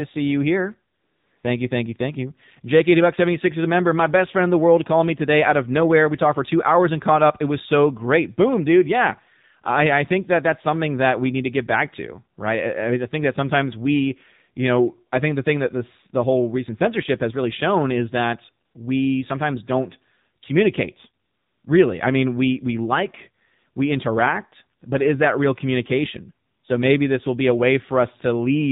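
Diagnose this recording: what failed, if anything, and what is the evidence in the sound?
The codec stage failed: AMR narrowband mobile codec damage is plainly audible across the whole recording. Nothing above 4 kHz survives, so a spectrogram shows a hard ceiling at 4 kHz with empty space above. The voice sounds buzzy and synthetic, and its harmonics look smeared, which fits a low-rate mode around 7.4 kbps. The codec rebuilds speech from a vocal-tract model excited by sparse pulses, so fine detail is lost at this bit budget.

Call processing also failed, through AMR comfort noise. The sender judged the talker silent and stopped sending speech frames, and the receiver filled those gaps with generated noise. This happens at 0.94–1.44 s (500 ms), 18.66–18.74 s (80 ms), 21.24–21.64 s (400 ms), at 24.8 s (20 ms), and at 26.46–26.64 s (180 ms). On the waveform each gap becomes a flat, even noise floor that switches in and out abruptly. 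A spectrogram shows smooth, featureless bands in place of the real background.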